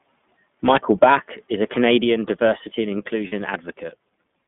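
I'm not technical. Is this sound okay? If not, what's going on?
No. iLBC codec, throughout: the speech has passed through this internet-calling codec, which squeezes each 20 ms slice separately and keeps only the range from about 150 Hz to 3.5 kHz. That is why the voice sounds thin, slightly rough and a little synthetic.

Microphone volume stepped down, at 1.04 s and again at 2.04 s: the voice and background each drop suddenly to a lower level in one step. The likely cause is calling software deciding the microphone was too loud and turning its input down.

Lost iLBC frames, from 3.28 to 3.34 s: two 20 ms chunks of audio went missing, about 40 ms in all. The decoder filled the hole by repeating the last bit of voice mixed with noise, so you hear a brief held, buzzy sound before normal speech returns.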